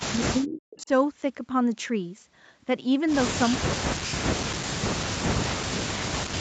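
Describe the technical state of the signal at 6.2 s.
At 6.2 s the speech is pushed down, dropping by as much as about 40 dB. This is likely speech suppressed in double talk, running from 3.51 s to the end, as the echo canceller turns down the talker along with the far-end echo.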